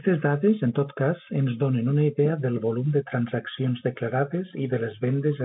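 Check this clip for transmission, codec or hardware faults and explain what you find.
No transmission, codec or hardware faults can be heard.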